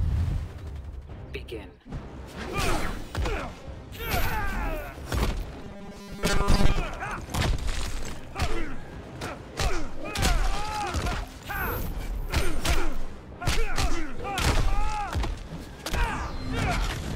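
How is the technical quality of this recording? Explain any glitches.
There's one real glitch. From 5.62 to 6.76 s you get robotic sound from repeated short buffers, a stiff metallic buzz pinned at 200 Hz. The likely cause is audio arriving too slowly, so a roughly 5 ms chunk gets looped over and over, with most of that stretch being repeats rather than fresh sound.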